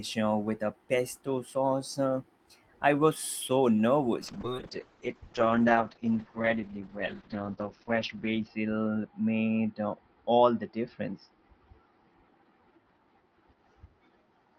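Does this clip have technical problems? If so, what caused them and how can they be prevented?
Yes, there's a call bitrate drop starting at 4.27 s and running to the end of the clip. The speech goes noticeably rougher and more muffled as the top end disappears, with the audio band shrinking from about 20 kHz to about 6 kHz. That fits the bandwidth estimate collapsing and the encoder falling from roughly 32 kbps to around 7 kbps, bottoming out for about 4.2 s. To prevent it, give the call a steadier connection (wired or less congested Wi-Fi) and set a sensible minimum bitrate floor.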